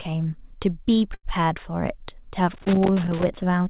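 From 1.14 to 1.25 s there is a burst of packet loss. About 100 ms of speech never arrived in time. The receiver stretched the last sound for roughly 90 ms and let it fade. Then the speech jumps ahead, with that stretch missing.

From 2.54 to 3.35 s comes loose connector crackle. A worn or dirty contact is making and breaking. This chops the signal into an irregular scratching burst. It runs for about 0.8 s over the speech.

Inside that crackle, from 3.09 to 3.13 s, is a short concealed packet loss. About 20 ms did not reach the decoder. The receiver patched roughly 14 ms by continuing the previous sound, then blended back. It is heard as a brief smear.

The band stops at 4 kHz. This points to a narrowband call codec such as 64 kbps G.711 A-law.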